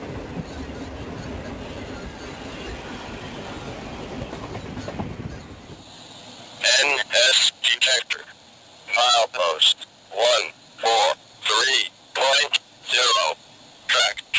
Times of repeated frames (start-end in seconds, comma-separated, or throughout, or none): none